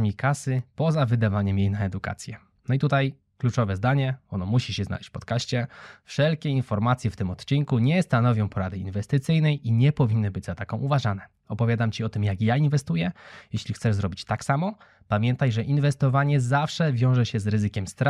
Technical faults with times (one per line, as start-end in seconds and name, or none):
0.59 dropped samples
7.65 dropped samples
13.58 dropped samples